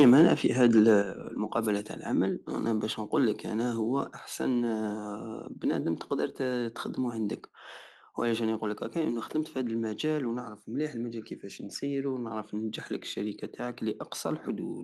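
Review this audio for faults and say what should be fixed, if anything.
The speech opens with microphone overload from 0.0 to 0.28 s and again from 0.63 to 0.91 s. Peaks run about 6 dB over the converter's limit at first, then about 2 dB, so their tops get flattened into a harsh crackle. The likely cause is input gain set too high. Drop the mic's input level before the call so peaks stay below the converter's limit.

The microphone volume also steps down at 0.02 s by about 2 dB and at 1.02 s by about 7 dB. Each time the level drops abruptly, likely the call software reacting to clipping. Setting a sensible input level up front means the software has no reason to yank it mid-call.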